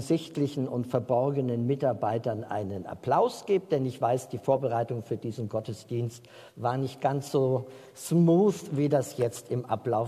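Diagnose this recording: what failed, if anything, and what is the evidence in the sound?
Nothing failed at any stage of the chain, from analogue wiring through playback, and there's no audible evidence of a fault to point to.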